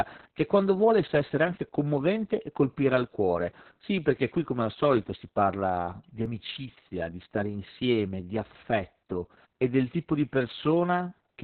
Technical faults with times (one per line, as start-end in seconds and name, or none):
0.00-11.44 Opus voice compression
0.00 hard clipping
6.26 dropped buffer (overrun)
10.51 dropped buffer (overrun)